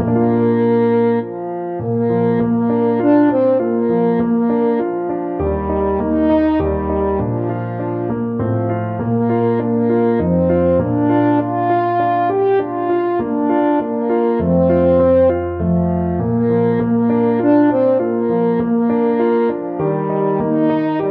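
No technical faults can be heard anywhere in this audio.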